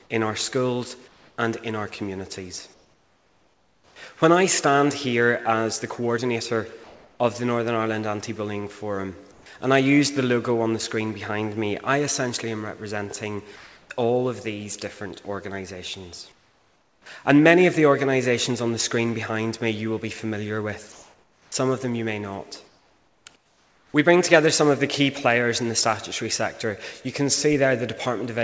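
Comfort noise replaces the background at 1.08–1.38, 2.74–3.96, 6.84–7.20, 9.32–9.46, 16.32–17.06, 20.92–21.52 and 22.68–23.94 s: a steady, featureless hiss, sometimes up to about 6 dB quieter, likely from discontinuous transmission. At 13.56–13.90 s, sound dropped by the voice detector: roughly 130 ms of audio gives way to that same synthetic noise, likely because the detector misjudged it as background. Nothing is heard above 8 kHz, consistent with a G.722 call path.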